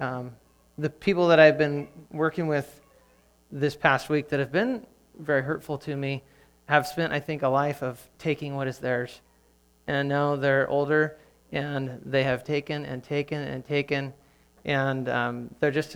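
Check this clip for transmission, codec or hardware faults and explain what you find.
No transmission, codec or hardware faults found.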